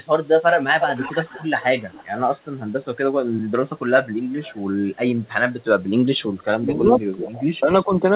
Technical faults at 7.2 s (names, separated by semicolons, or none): speech suppressed in double talk